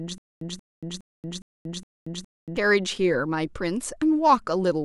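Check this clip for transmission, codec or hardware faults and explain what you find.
One fault is present: a stutter with silent gaps, already under way when the clip begins and lasting until 2.57 s. A stalled stream likely replayed its last fragment on each retry, then ran empty. The same 0.18 s burst repeats six times, each followed by 0.23 s of digital silence, every 0.41 s, and the speech for that span is lost. The waveform shows identical blocks between flat silent stretches, and the spectrogram shows matching patches separated by blank gaps.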